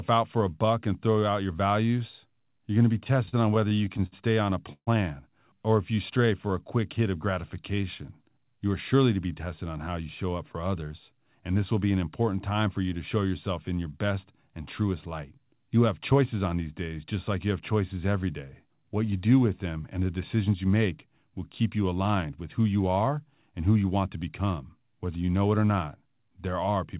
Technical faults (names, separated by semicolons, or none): repeated stalls (stutter); jitter buffer slow-down; jitter buffer speed-up